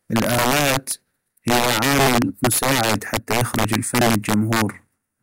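A speech recording carrying integer overflow throughout: the signal is pushed about 3 dB past the integer limit, and instead of being held at full scale the loudest peaks wrap around to the opposite extreme. Only a small share of samples, around three percent, cross over, so the damage lands on louder syllables as violent, splintering cracks. Ordinary clipping would flatten those peaks into a duller buzz; here the full-range sign flips make them far sharper.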